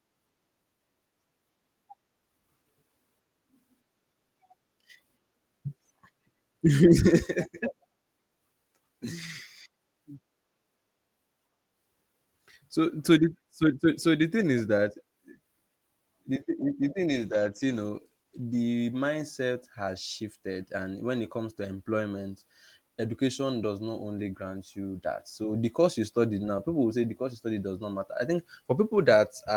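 From 17.21 to 18.91 s a call bitrate drop turns the speech rough and watery, consistent with the encoder falling from about 32 to 16 kbps and coding more coarsely for roughly 1.6 s. A spectrogram shows smeared, blocky harmonic detail across that stretch.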